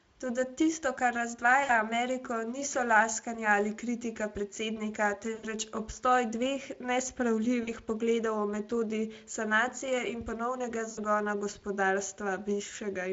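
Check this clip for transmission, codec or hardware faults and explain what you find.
The speech has four short dropouts, all from VoIP packet loss concealed by the speech codec. The Speex coding itself sounds only lightly worn.

At 1.63–1.71 s, 5.35–5.49 s, 7.63–7.72 s and 10.91–11.00 s, the speech smears into a brief buzzy tone or coloured noise that fades, and stays thin for a moment afterwards. About 60, 80, 40 and 60 ms of audio went missing. The decoder filled each gap by repeating its last pitch and filter at falling gain, and because each frame builds on the one before, the recovery lags slightly once packets resume.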